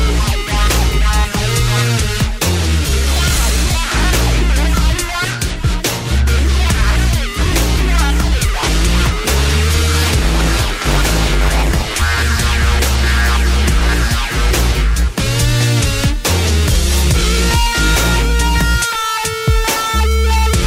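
The audio carries a block size mismatch (padded) from 10.08 to 11.99 s. Each block read at the next stage is only partly filled, and the remainder is zero-padded, so a brief silent gap lands in every block. That produces a buzz at about 93.8 Hz, which fits 512-sample reads at 48 kHz with roughly 480 samples written per block. Playback in this stretch runs at 0.938 of normal speed while the timbre stays.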